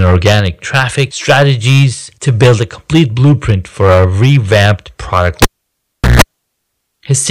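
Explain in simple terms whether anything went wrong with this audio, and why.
Throughout the recording, the speech was fed into the equipment far louder than it could handle, so whenever the signal got too big, the tops of the waveform were simply chopped off flat. This is called hard clipping. It affects only a small share of the sound at any moment, but it happens on every loud syllable, so the voice sounds harsh and fuzzy on its louder parts rather than clean.

Just after "for our revamped product", at 5.42 s, the cable was pulled and plugged in again. Unplugging makes a pop, and then the sound drops to near silence for about three quarters of a second. As the plug goes back in and only its tip is touching, there is a short burst of electrical hum from the 60 Hz power supply, lasting about 0.15 s. A second pop follows as the sound comes back at 6.22 s.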